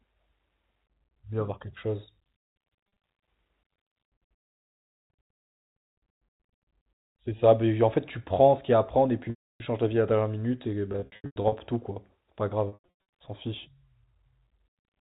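Speech over a G.711 telephone line, band-limited below 4 kHz, breaks up from packet loss with pitch repetition at 2.95, 9.3–9.6, 10.92–11.52 and 12.68–12.98 s. Unlike plain dropouts, the gaps hold a buzzy repeated pitch period that fades to silence across the longer losses, about 300 ms at 9.3 s.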